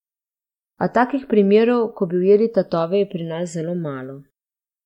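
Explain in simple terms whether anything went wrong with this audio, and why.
Channels drifting apart throughout this speech: the two sides, recorded on slightly mismatched clocks, slip out of step, under a millisecond by the end, causing a slow, sweeping flanging sound.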